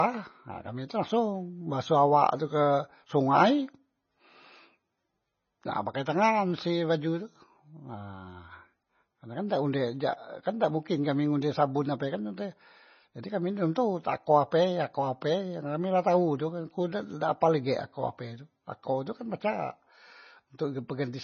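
Speech throughout carries heavy MP3 compression artefacts, likely from a starved bitrate near 24 kbps: the treble stops dead at 6.6 kHz, and sibilants sound watery and swirly. A spectrogram shows a flat ceiling there, with weaker detail flickering in and out as holes.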